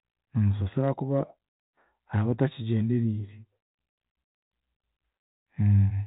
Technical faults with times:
none

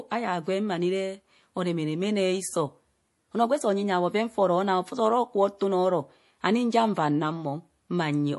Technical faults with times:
0.00-8.38 MP3 compression

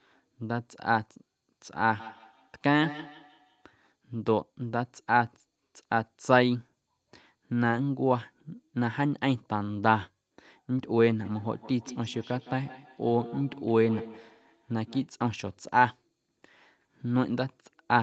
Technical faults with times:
2.00-3.75 feedback echo between two devices
11.25-15.12 feedback echo between two devices

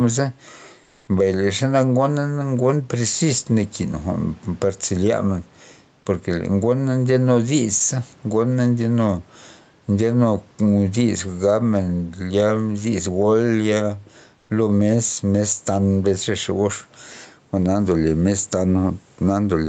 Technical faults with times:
0.00-19.68 gain pumping
0.83-1.07 comfort noise in place of the background
14.37-14.49 comfort noise in place of the background

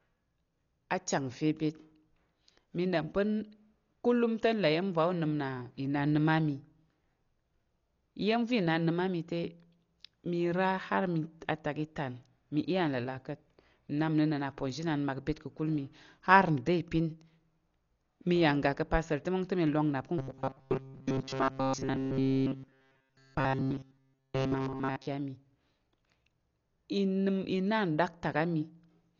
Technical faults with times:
0.00-29.19 Dolby Digital compression
20.18-25.07 robotic sound from repeated short buffers

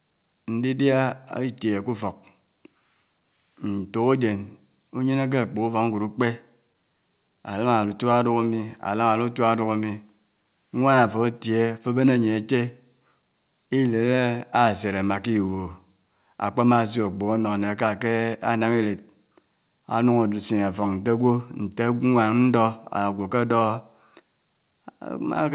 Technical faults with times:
none

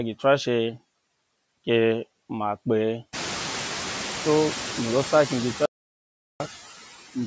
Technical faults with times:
0.00-7.26 noise suppressor artifacts
5.66-6.40 audio dropout to silence

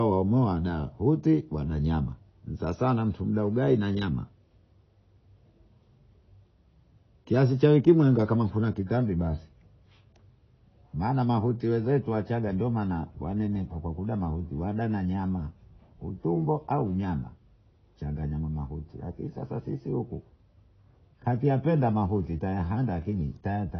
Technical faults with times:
0.00-23.79 AAC compression

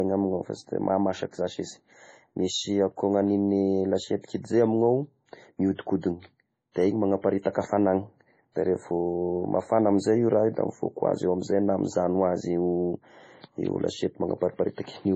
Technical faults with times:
0.00-15.16 MP3 compression

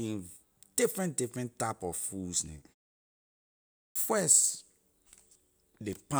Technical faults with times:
3.87-3.96 clipped start after a pause

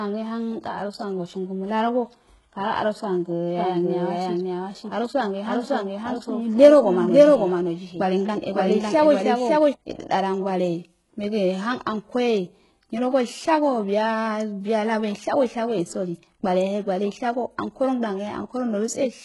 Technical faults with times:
0.00-19.25 HE-AAC compression
3.57-9.73 doubled audio track

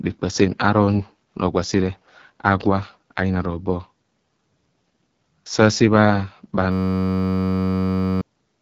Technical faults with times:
0.00-8.62 AMR wideband (HD Voice) codec
6.72-8.21 system hang loop

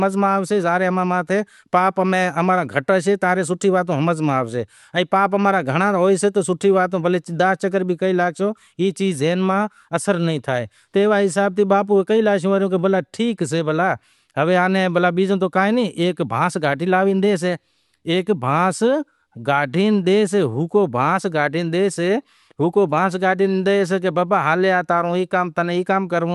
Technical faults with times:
none

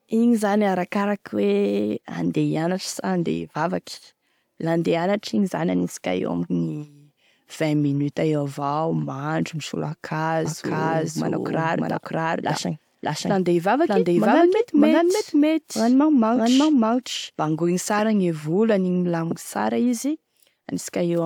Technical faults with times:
10.45-17.99 doubled audio track

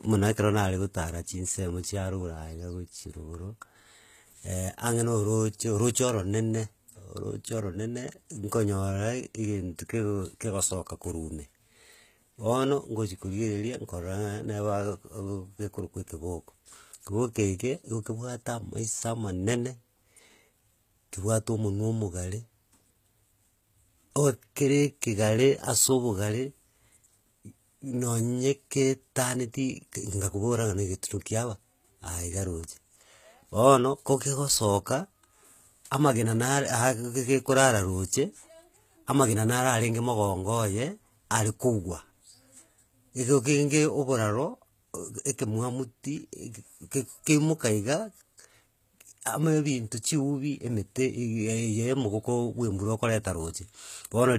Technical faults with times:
0.00-54.39 HE-AAC compression

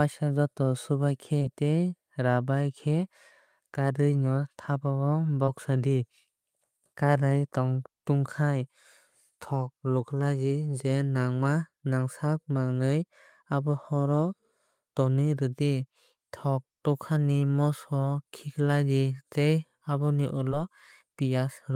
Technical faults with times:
1.39-1.43 short concealed packet loss
5.45-5.49 short concealed packet loss
20.49-20.53 short concealed packet loss

